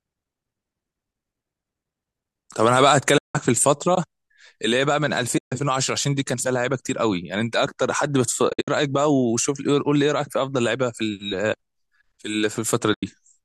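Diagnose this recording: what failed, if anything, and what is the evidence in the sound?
The fault is in the network and codec stage: AAC frame loss with muting. Four soft-edged holes cut into the speech. They fall at 3.18 to 3.35 s, 5.38 to 5.52 s, 8.50 to 8.68 s and 12.94 to 13.03 s. The third is broken up, with gaps scattered over 180 ms and the longest run about 70 ms. The decoder zeroed the missing frames, and the overlapping windows faded the sound down and back up. The hole lengths fit short frames of about 10 ms, as in low-delay AAC, which is the likely codec here.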